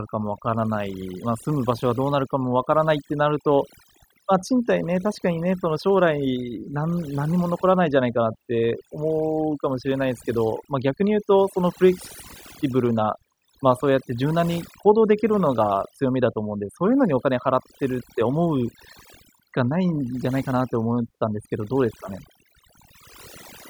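From start to finish, the recording carries overdone noise removal: the noise reduction was set far too aggressively, cutting individual frequency bands whenever they approached its noise estimate. Quiet speech detail vanishes with them, leaving near-silent gaps dotted with twinkling specks.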